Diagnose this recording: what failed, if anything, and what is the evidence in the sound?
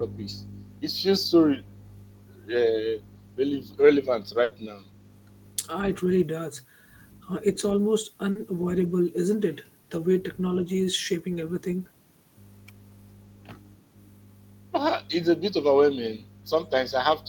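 Network first: there's a burst of packet loss at 4.43 to 4.54 s. The receiver stretches the last sound for about 80 ms, fading it as a buzz or hiss, then picks up again with roughly 80 ms of real audio simply gone.

From 4.93 to 5.22 s you can hear a very faint copy of the speech trailing about 160 ms behind. That's likely an echo leak from call processing: the far end's echo canceller failed to remove all the loudspeaker sound its microphone picked up, and the remainder was sent back.

Back on the network side, a short concealed packet loss lands at 8.31 to 8.38 s. About 40 ms never arrived, so the decoder patched it from the preceding sound and blended back in, leaving a brief smear or wobble.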